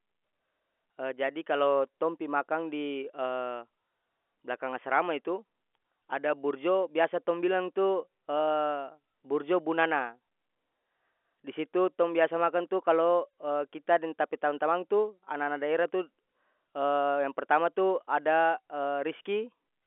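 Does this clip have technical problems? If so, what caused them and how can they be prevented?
No, there's nothing to fix here: this is ordinary speech over a G.711 A-law telephone line at 64 kbps, so it sits in the usual 300 to 3400 Hz band with nothing much above about 3.8 kHz, which is just how that format sounds.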